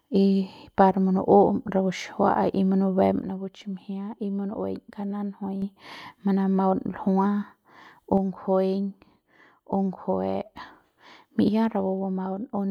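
After "rapu xijiua'a y munubem", the level falls abruptly by about 6 dB from 3.22 to 5.62 s. It falls again from 8.18 to 10.58 s and from 11.48 s to the end. One channel likely drops out, halving the mono sum.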